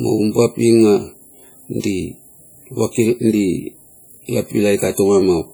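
Throughout the speech, ringing, washy smearing and hiss that breathes with the signal, likely heavy WMA compression at a low bitrate near 32 kbps.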